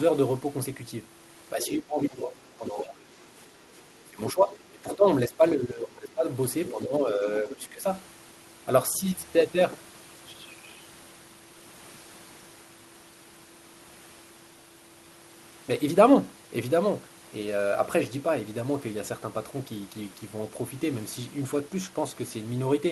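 From 1.53 to 7.85 s the talker's speech is suppressed in double talk. Level dips by up to about 15 dB across roughly four seconds of that span. The likely cause is an echo canceller that could not tell near speech from loudspeaker echo and attenuated both.

In the same stretch, the other side's voice leaks through at 1.61–1.68, 2.66–3.24, 4.28–4.32, 4.91–4.96, 6.66–6.71 and 7.50–7.56 s. These are fragments about 10 to 15 dB under the talker, likely residual echo the canceller missed. The call codec limits the band to about 12 kHz throughout.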